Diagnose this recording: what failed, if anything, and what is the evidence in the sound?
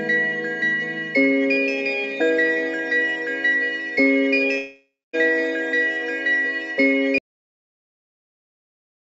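From 4.58 to 5.15 s the sound smears into a fading buzz, then silence, and resumes with material gone: a long network dropout, likely lost packets.

At 7.18 s the audio halts mid-sound into dead digital silence with no decay. This is a cut-off end at the buffer stage, not a natural fade.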